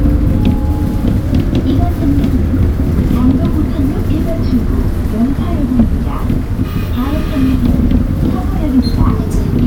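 Everyday sounds jump about a semitone sharp and faster from 1.26 to 2.93 s, then a semitone flat and slower from 4.89 to 6.07 s, each snapping back. This is likely a drift correction step changing the playback rate by about 6.5% in each direction.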